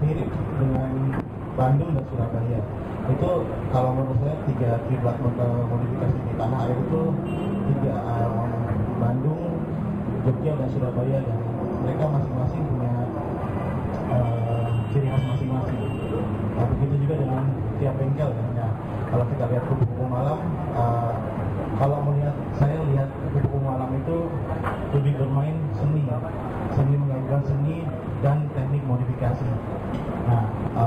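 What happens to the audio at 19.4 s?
At 19.4 s the imaging from linear upsampling present throughout the clip is heard. The audio was raised from 11 kHz to 44.1 kHz by straight-line interpolation, which dulls the top of the band and leaves mirror images from 5.5 to 11 kHz, about 45 dB down, heard as metallic shimmer on high-frequency content.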